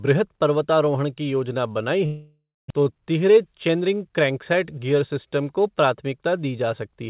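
A long network dropout runs from 2.06 to 2.72 s, after "पर्वतारोहण की योजना बनाई". The audio fades to about 250 ms of silence, likely from roughly 600 ms of lost packets never played.

A jitter buffer speed-up follows from 3.30 to 3.88 s, before "क्रैंकसेट गियर सिस्टम को". Tiny pitch-period slices totalling about 50 ms are cut, so the speech hurries to 108% without changing pitch. Throughout, nothing above 4 kHz comes through, which fits a narrowband call codec such as G.711.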